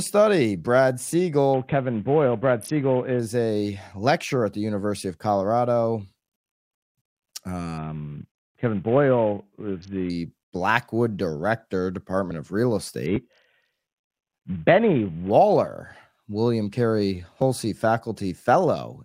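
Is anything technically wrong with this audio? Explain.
Yes. The speech has three Bluetooth SBC bit pool drops, at 1.54 to 3.20 s (ending just before "a lecturer at the"), 7.78 to 10.10 s, and 13.06 to 15.30 s. Each time the treble dulls and a gritty noise creeps in, then clears. That fits the sender cutting the SBC bit pool from 28 to about 5, roughly 54 kbps. The top sub-bands go starved and the rest get coarse quantisation until the link recovers.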